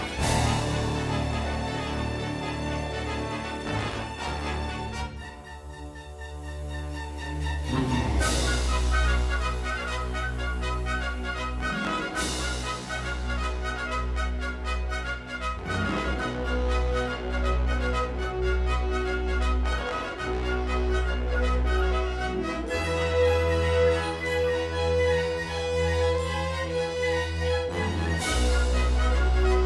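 No technical faults can be heard anywhere in this audio.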